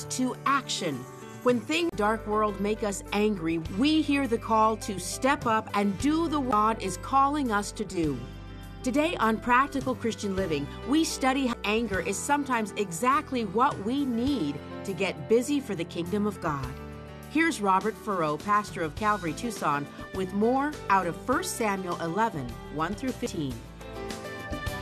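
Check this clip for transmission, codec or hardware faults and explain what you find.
Four CD skips can be heard, at 1.89–1.92 s, 6.51 s, 11.53 s and 23.26 s. Each is a tick with a brief mute, from about 30 ms down to a few milliseconds, before the sound resumes elsewhere. A knock or disc flaw threw the laser onto another turn of the spiral.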